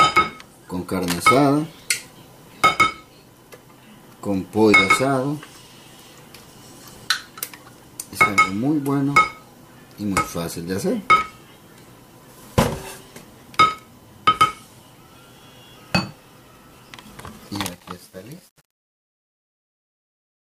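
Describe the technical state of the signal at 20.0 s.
At 20.0 s the signal is deep in the truncation distortion on the fade-out that runs from 17.47 s to the end at 20.48 s, at its worst from 17.61 s onward. The fade is being computed with only about 8 bits and no dither, so near the bottom of the level the waveform collapses into a few coarse square steps. It sounds gritty. On a waveform view the tail looks blocky and stair-stepped, and a spectrogram shows broadband harmonic hash instead of a clean taper.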